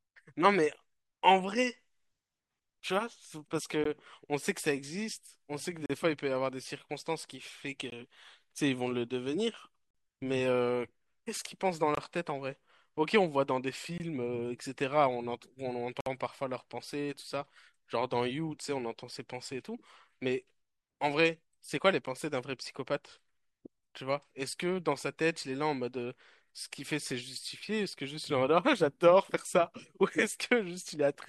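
At 3.84, 5.86–5.90, 7.90, 9.91–9.95, 11.95–11.97, 13.98, 16.01–16.06 and 22.06 s, gaps between stream segments spaced at 2-second segment boundaries leave hard-edged silent holes of 10 to 58 ms, filled with silence by the player without losing audio. Waveform and spectrogram show clean vertical blank strips.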